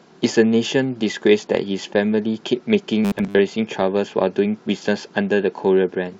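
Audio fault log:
3.05–3.39 s: robotic sound from repeated short buffers. The speech turns into a stiff, metallic buzz at 100 Hz. That pitch matches a 10 ms slice replaying over and over. Most of this stretch is repeats. The likely cause is new audio arriving too seldom.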